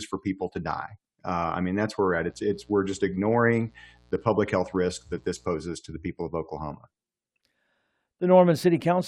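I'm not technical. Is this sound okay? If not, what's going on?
No. From about 2.17 to 5.48 seconds, a steady, raspy buzz sits quietly underneath the speech, then stops. This is mains buzz: electrical interference from the power supply, perhaps from a light dimmer, a power adapter or a poorly shielded cable, leaking into the recording. The power here alternates 60 times a second, and the interference arrives as sharp little spikes locked to that rhythm, which gives the buzz its harsh, gritty edge rather than a smooth hum.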